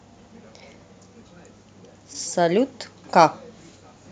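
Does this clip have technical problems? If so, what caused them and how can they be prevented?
No, nothing in this speech clip points to a technical fault, so there is no cause to trace and nothing to prevent.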